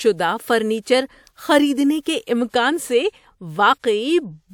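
At 0.80, 2.49 and 3.79 s, pre-echo puts a short hiss about 43 to 58 ms ahead of sharp speech onsets. The codec spread each block's noise back before the attack, so it comes before the sound and blurs it, unlike reverb or echo, which trail afterwards.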